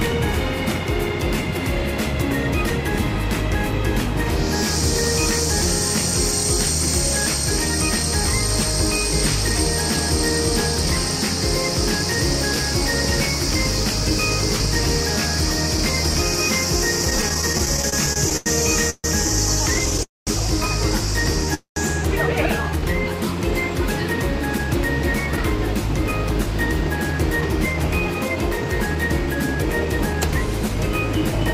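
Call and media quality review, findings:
Repeated stalls (stutter), 17.05–18.48 s: packets arriving late or slower than playout kept emptying the jitter buffer, 17 times across this span. Receiver extended the last sound each time, about 305 ms filled in total, longest gap 91 ms. Roughly a fifth of the span is concealment, heard as dragging, stuttering audio with nothing dropped. Second, lighter burst 19.74–20.01 s: five gaps, 44 ms filled, none longer than 10 ms, about 16% of the span.

Call audio freeze, three events, likely packets held up in transit, each draining the jitter buffer. At 18.90–19.06 s a 141 ms hold: the last sound is stretched, then about 40 ms of silence. At 20.03–20.29 s a 239 ms hold, 180 ms of it silent. At 21.54–21.78 s a 222 ms hold, 120 ms silent. Playback resumes where it stopped, adding delay equal to each hold, with no audio lost.

Jitter buffer slow-down, 22.63–23.09 s: buffer running low, so the receiver repeated single pitch periods and pause fragments to rebuild reserve. 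About 67 ms inserted, playback at 87% speed with pitch unchanged. Sounds are drawn out and lag across this half second, a brief slow, stretched passage shortly after the freezes.

Jitter buffer speed-up, 24.58–31.36 s: buffer over target, so the receiver cut short pitch-period pieces repeatedly to shed delay. Roughly half a second removed, playback near 108% speed at unchanged pitch. Nearly seven seconds sound hurried.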